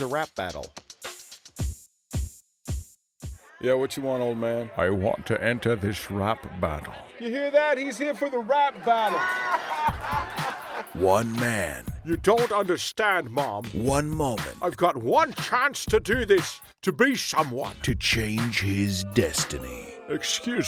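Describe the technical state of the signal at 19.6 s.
At 19.6 s the signal is intact, with no audible technical fault at that moment.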